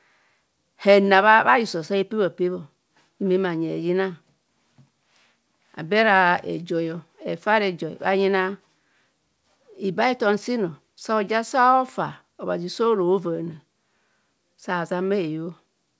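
A recording of speech with no technical fault to point to anywhere. It has come through a WebRTC call path working as it should, and the band-limited sound with nothing above 8 kHz fits a G.722 codec.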